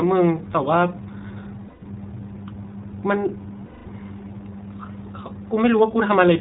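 Throughout the clip, iLBC codec coding cuts everything above 4 kHz and makes the speech plainly rough and synthetic, which fits the 15.2 kbps mode with 20 ms frames. Lost iLBC frames appear at 1.68 to 1.83 s (140 ms, fitting seven frames) and 3.66 to 3.87 s (200 ms, fitting ten). In each gap, the decoder repeats the last pitch cycle mixed with noise, so a held, buzzy vowel fills the gap before the speech snaps back.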